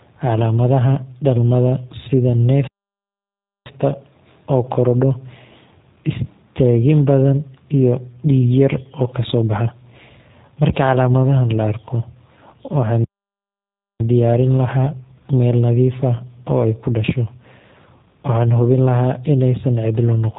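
From start to finish the speech passes through a G.729 codec, its output consistent with the 8 kbit/s G.729A variant, which rebuilds each frame from a vocal tract model and a few pulses. Nothing above about 3.8 kHz survives, so it sounds muffled, slightly rough and synthetic.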